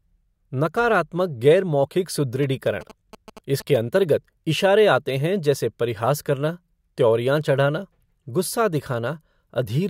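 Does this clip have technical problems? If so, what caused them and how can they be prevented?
Yes. From 2.43 to 3.77 s, just before "अंतर्गत इशारे आते हैं", the speech carries GSM signalling bursts: a galloping cluster of ticks and brief buzzes at 217 Hz, sitting well below the speech level. A nearby 2G phone exchanging signalling with its network transmits short radio bursts, and the audio circuitry rectifies that RF into audible pulses at the burst rate. Keeping phones away from microphones and cables, or putting them in flight mode, prevents it.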